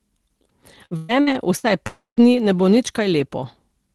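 From 0.85 to 1.66 s, repeated packet loss makes the speech choppy and robotic. Four gaps, the longest 121 ms, are patched by stretching the previous sound. From 1.87 to 2.20 s, the sound smears into a fading buzz or hiss, then 130 ms of silence before "dni ne bo nič." A long network dropout is the likely cause.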